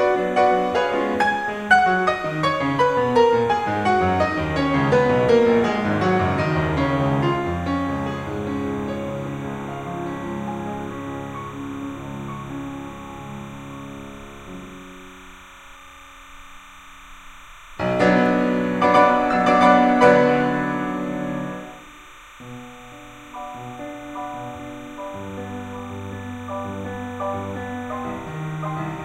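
Timecode bleed runs throughout the music: linear timecode from a neighbouring track or cable has leaked in, its square wave flipping between pitches near 1 and 2 kHz at 30 frames per second, producing a steady chirping warble well beneath the music.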